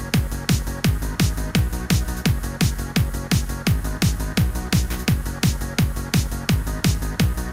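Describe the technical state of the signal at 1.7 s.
At 1.7 s the signal is intact, with no audible fault at that moment.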